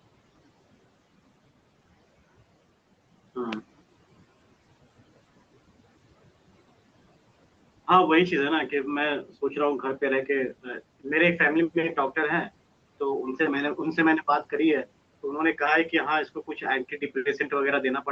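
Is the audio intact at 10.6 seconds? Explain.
Yes, at 10.6 seconds the speech is intact, with nothing more than the background room noise and the limited high end of a call line that are present throughout.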